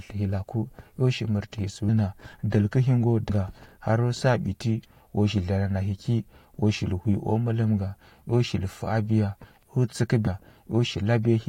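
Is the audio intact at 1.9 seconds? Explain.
No. At about 1.88 s there are compressed frames skipped. A run of frames, roughly fifteen of them, never reaches the output, either because they're missing from the file or because the decoder threw them out as damaged. With 21.3 ms frames, the speech jumps ahead by around 300 ms, so a chunk is simply gone. You hear an abrupt lurch forward at the join.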